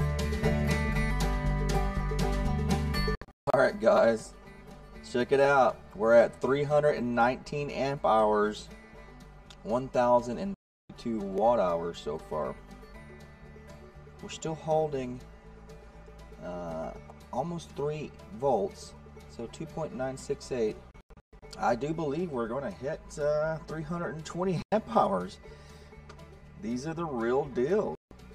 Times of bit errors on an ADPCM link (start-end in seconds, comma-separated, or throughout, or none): none